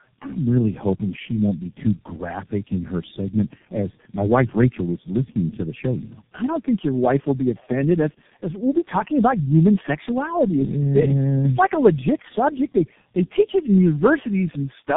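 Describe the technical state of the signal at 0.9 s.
Tandem speech coding is present at 0.9 s, as it is across the whole clip. The speech sounds like it passed through three low-rate speech coders in a row, which fits AMR-NB at 6.7 and 7.95 kbit/s followed by G.723.1 at 6.3 kbit/s. Each stage re-encoded the previous one's already damaged output, so the losses compound. Nothing sounds above about 3.7 kHz, leaving the speech muffled, rough and warbly.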